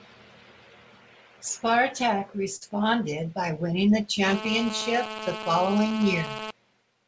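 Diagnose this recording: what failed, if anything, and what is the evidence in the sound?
A short stall from a late packet appears at 2.56 to 2.63 s, at the network and jitter-buffer stage. The buffer ran dry, so the last sound was held for about 52 ms, then speech resumed where it stopped. Unlike a dropped packet, nothing is skipped.

GSM phone buzz enters through the analogue wiring from 4.27 to 6.51 s: a hard, raspy 217 Hz buzz with dense harmonics, about 8 dB below the speech. A nearby phone on a call produces a steady buzz. Mains hum would sit at 50 or 60 Hz and sound smoother.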